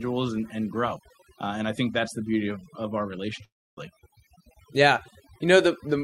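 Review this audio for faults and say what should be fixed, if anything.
Overdone noise removal runs through the whole speech clip. The suppressor pulls individual frequency bands down whenever they sit close to its noise estimate, so quiet speech detail is lost with the noise. The background becomes near silence with twinkling specks. Lower the reduction strength or improve the source noise floor.

A long network dropout starts at 3.44 s, right after "beauty of of our", and lasts to 3.78 s. The last sound is stretched into a fading buzz, then goes silent for most of the gap. Roughly 300 ms of speech never returns, and the likely cause is a stall in packet arrival. Use a more reliable link or add redundancy such as FEC.

A jitter buffer speed-up runs from 4.37 s to 4.91 s. After the gap the buffer held more audio than its target, so the receiver cut short pitch-period pieces in quick succession, dropping about 50 ms. 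The speech plays at about 107% speed with unchanged pitch and sounds hurried. Spread the buffer correction over a longer stretch.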